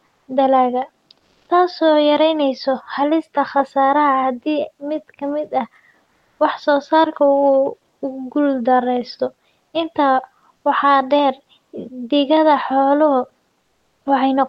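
Around 1.19 to 1.49 s, just before "taasoo yareynaysa halista khasaare", the real room background drops out and a flat, featureless hiss fills the gap. That's comfort noise in place of the background, likely from Opus discontinuous transmission: the sender stops sending during the pause and the receiver invents shaped noise. Here it's about 3 dB louder than the real background, which sits roughly 49 dB under the loudest speech. It happens again at 6.05 to 6.39 s, right after "mid ka mid ah", about 1 dB quieter. At 13.61 to 14.05 s it's about 12 dB quieter.

At the end of that last gap, around 14.03 to 14.05 s, the returning speech snaps in hard with no soft lead-in. That's an onset clipped by the voice detector: the detector was likely slow to notice the speech starting, so about 20 ms never got sent and comfort noise covered it. Throughout, the call path's codec limits the top end to about 12 kHz.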